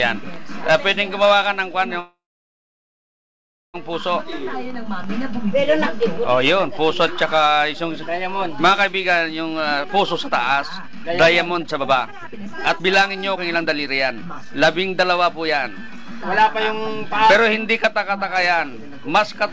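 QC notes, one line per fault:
2.00–3.76 s, call audio freeze: The audio stops moving forward for about 1.74 s. The last sound is drawn out briefly as a fading buzz or hiss, then silence holds for about 1.55 s. The audio then resumes exactly where it stopped, with nothing skipped. The likely cause is packets held up in transit, so the jitter buffer ran dry and the receiver filled the wait. Everything after this point plays about 1.74 s later.
9.47–17.10 s, jitter buffer speed-up: Playback runs at about 123% speed while the pitch stays unchanged, so the audio sounds clearly hurried. The receiver was holding more buffered audio than it wanted, as happens when delayed packets arrive in a bunch. To shed that backlog it cut out many short slices, each one or a few pitch periods long, in quick succession. Together these cuts remove about two seconds over the stretch, shortening it without any audible pitch shift.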